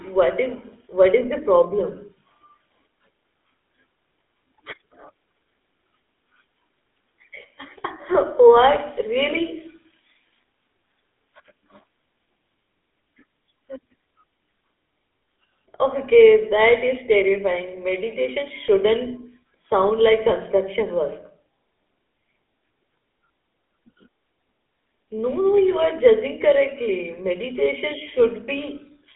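Throughout, the speech has passed through the GSM full-rate codec, consistent with 13 kbps coding: a vocal-tract model driven by sparse regular pulses rebuilds it. That leaves a plainly audible buzzy, gravelly roughness, a 250 Hz to 3.6 kHz band, and nothing above 3.8 kHz.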